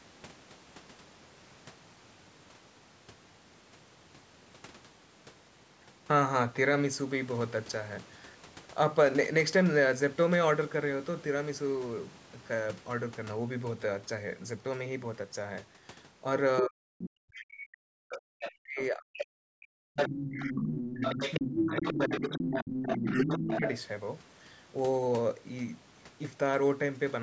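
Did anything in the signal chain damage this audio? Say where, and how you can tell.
Yes. The call processing stage's echo canceller likely let the far end through: the other side's voice leaking through appears at 16.57–16.62 s, 18.09–18.85 s, 19.18–19.22 s and 19.95–23.71 s. The first and last sit only about 5 dB under the talker, the middle two about 10 dB under. This is loudspeaker playback picked up by the microphone and not fully subtracted, heard as a second, fainter voice riding alongside the speech.

Over the same stretch, 16.61 to 23.63 s, speech is suppressed in double talk. With both ends active, the canceller likely could not tell the local talker from the echo and attenuated everything. The speech dips in pieces, around 40 dB at its deepest, totalling roughly 5 seconds of affected sound. The band-limiting to 8 kHz from the call's microphone processing is ordinary and separate from these faults.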